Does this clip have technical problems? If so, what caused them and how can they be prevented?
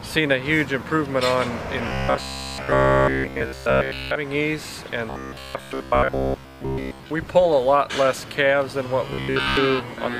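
Yes. Robotic sound from repeated short buffers is heard from 1.88 to 4.16 s, 5.10 to 7.11 s and 9.11 to 9.57 s as a rigid 66.7 Hz buzz. This fits a likely 15 ms block being replayed whenever new audio arrived late. During the first stretch nearly all of the audio is repeated, and during the later two most of it is. A spectrogram would show evenly spaced horizontal harmonics at multiples of 66.7 Hz, and the waveform would show identical cycles repeating every 15 ms. Larger or adaptive input buffers and steady, timely delivery of audio to the playback stage would prevent this.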